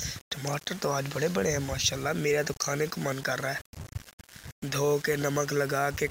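Low bit depth without dither runs through the whole clip, from start to end. The sound is coarse and grainy, and the grit rises and falls with the signal. The likely cause is rounding to about 6 bits with no dither. That leaves an error only about 20 dB below the signal, and because it tracks the waveform it is heard as distortion.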